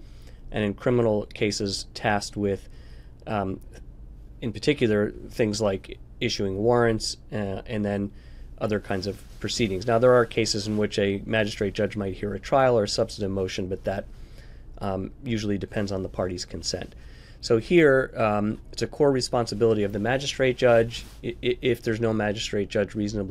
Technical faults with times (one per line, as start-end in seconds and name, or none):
none